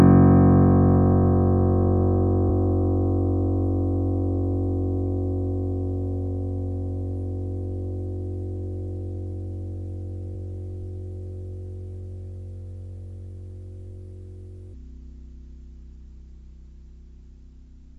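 Compressed frames skipped at 2.49 s: the sound jumps ahead by roughly 150 ms, about seven whole frames of around 23 ms each that never reach the output.

Section at the wrong speed from 14.74 s to the end: playback runs at 0.688 times normal speed, so everything turns slower and about seven semitones deeper, with pitch and tempo dropping together. The likely cause is this stretch being played against the wrong clock.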